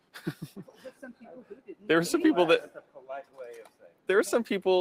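Across the whole clip the level keeps pumping and thinning, with sustained parts and tails sinking by around 10 dB while attacks pass. A noise suppressor applied to music or sounds, built for speech, mistakes steady material for noise and turns it down. Sound cut by the noise suppressor then shows as distinct dips at 0.59–1.23 s (about 10 dB), 1.43–1.84 s, 2.75–3.39 s and 3.63–4.09 s (each about 11 dB), where held sound sags and decays shorten as the suppressor clamps down.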